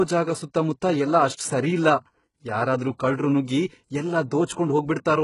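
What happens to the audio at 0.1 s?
HE-AAC compression is likely at 0.1 s, as throughout the speech: heavily damaged treble, rebuilt by copying lower bands upward, turns s sounds gritty and metallic, with nothing above 11.1 kHz, pointing to a very low bitrate.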